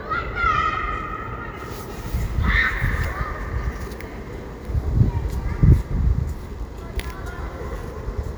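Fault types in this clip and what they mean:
Nothing's wrong with these sounds; there aren't any faults here to list.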